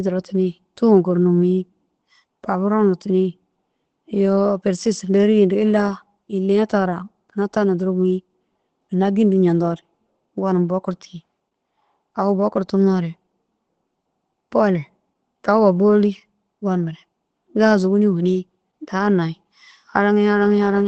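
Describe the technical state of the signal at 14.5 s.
At 14.5 s the speech sounds muffled and hoarse, with a faintly robotic edge and nothing above about 8.4 kHz. This is Opus voice compression, present for the whole clip rather than just this moment. Its SILK linear-prediction coder, running in wideband mode, cuts the spectrum at 8 kHz and codes the excitation coarsely, so the damage is plainly audible. That fits a low bitrate of around 12 kbps.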